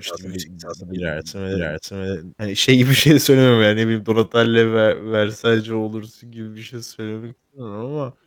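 From the very start until 3.0 s, a doubled audio track is heard. A second full-band copy of the speech runs about half a second behind the first. It is about as loud as the original, with no decay or room colour. The likely cause is a second capture through a slower path, or an edit holding two copies out of step. The copy stops abruptly at 3.0 s, just before "söylemem yani ne bileyim".

Right after "söylemem yani ne bileyim", at 4.16 s, a time-stretched section begins and runs to the end. The pace drops abruptly to 0.659 times normal speed, while the pitch stays the same. The slowed speech drags. This is likely software stretching the audio to fit a length, repeating short pieces to keep the pitch.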